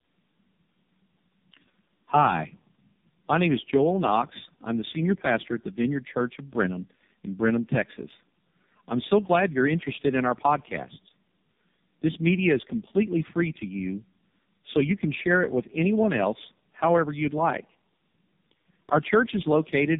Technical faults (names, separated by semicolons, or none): tandem speech coding